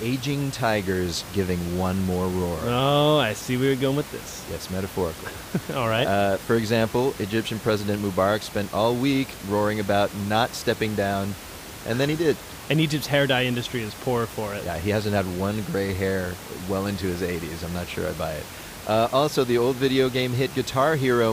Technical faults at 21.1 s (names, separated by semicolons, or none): none